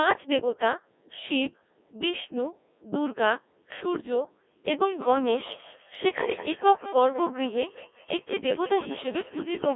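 This speech clip sounds robotic and buzzy from start to finish, as if the talker were rebuilt from a hum. The band is squeezed to roughly 250 Hz to 3.6 kHz, and the breath and texture of a natural voice are gone. This is the Codec 2 vocoder, and the heavy damage fits its low-rate mode of around 1.6 kbit/s. It does not keep the waveform. It sends only pitch, voicing, loudness and a rough spectral shape, and the decoder rebuilds the voice from sine waves. From 4.85 s to the end, a second fault appears: each stretch of speech comes back about a fifth of a second later, thinner and ringing, with the repeats peaking at about 15 dB below the speech. That regular return is feedback echo between two devices. Two devices in the same room are on the call, so one plays out what the other's microphone sent, and that microphone picks it up again. Each device's echo canceller removes only its own playback, so the loop goes round uncorrected.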